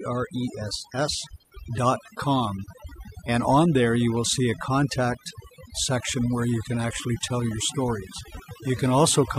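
Overdone noise removal runs throughout the speech. Aggressive noise reduction suppresses bands near its noise estimate, leaving twinkling specks in near-silent gaps.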